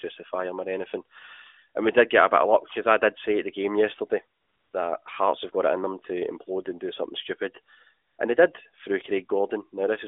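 Speech over an AMR narrowband mobile path limited to roughly 300 Hz to 3.6 kHz, with light codec damage, shows AMR comfort noise at 4.40 to 4.74 s (340 ms) and 8.08 to 8.18 s (100 ms). The phone stopped sending speech frames, and the receiver filled the gaps with smooth synthetic noise that switches in and out. Unlike a dropout or noise gate, the pause holds generated hiss rather than silence.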